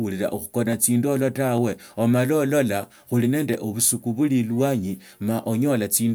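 Three sharp clicks cut through the speech, at 0.73 s, 1.58 s and 3.54 s. Each is a single tick with nothing around it, and in a spectrogram each shows as a thin vertical line. They are most likely dropped samples: well under a millisecond of the stream goes missing, so the waveform leaps straight to a later value. Unlike a dropout, no sound audibly vanishes; the speech runs on unbroken around each click.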